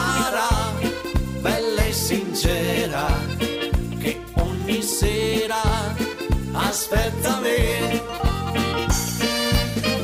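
No technical faults can be heard anywhere in this clip.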